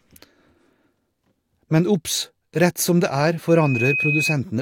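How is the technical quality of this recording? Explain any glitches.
There's one real problem here: a loudspeaker feedback squeal near the end of the speech. From about 3.48 s to 4.36 s, a single tone at 2.5 kHz rises out of the sound, takes a little under half a second to swell, and ends up roughly as loud as the speech itself. A mic was picking up a speaker it was feeding, and at 2.5 kHz the loop gain crept above one, so that frequency kept reinforcing itself into a piercing whistle.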